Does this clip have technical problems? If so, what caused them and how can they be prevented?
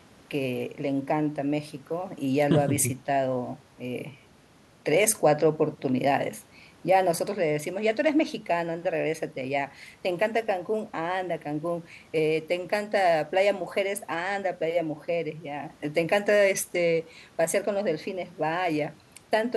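No, nothing technical stands out in this speech recording, so there's no problem here to trace back or prevent.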